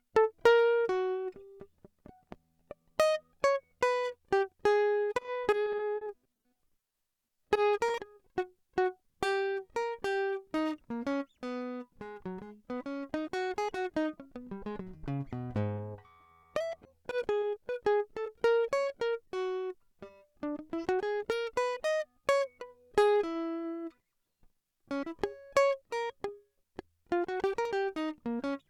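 A music recording with two separate stretches of network packet loss. From 5.14 to 7.90 s there is repeated packet loss with a robotic sound. Dropouts follow one another closely, each no longer than about 30 ms, and the receiver covers every hole by extending the last stretch of audio. Around 280 ms of material is missing and about 320 ms of patched sound replaces it, roughly 12% of the stretch. Because the concealment repeats so rapidly, the music turns choppy and robotic. From 15.77 to 19.28 s the problem is scattered short gaps. About fifteen brief holes, none longer than about 10 ms, appear one at a time with clear audio in between. They total 110 ms of lost material, covered by roughly 150 ms of extended sound, a few percent of the span. These show up as isolated ticks and small smears, not a continuous robotic texture.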